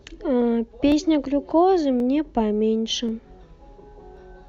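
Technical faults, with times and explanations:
0.92 to 4.17 s, clock drift buffer slips: about four clicks every 1.08 s, likely mismatched device clocks dropping or repeating about 15 samples; thin vertical spectrogram lines, tiny waveform steps.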